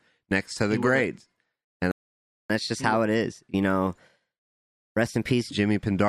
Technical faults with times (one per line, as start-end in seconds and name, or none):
1.91-2.50 playback stall
2.50-5.50 catch-up at higher speed